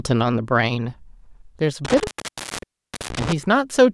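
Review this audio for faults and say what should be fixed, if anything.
A loose cable or plug in the signal path made an intermittent contact between 1.85 and 3.33 s, with the line opening for about 1.03 s in total. Each time the connection broke and remade, the speech dropped out abruptly, with crackle at the edges of the gaps, and a faint hiss remained while the circuit was open. This should be fixed: reseat or replace the suspect cable and connectors, and secure them with strain relief so they cannot shift during recording.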